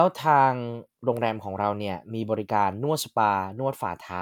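No technical faults are audible anywhere in this speech.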